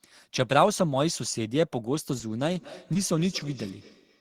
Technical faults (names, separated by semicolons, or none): short concealed packet loss; feedback echo between two devices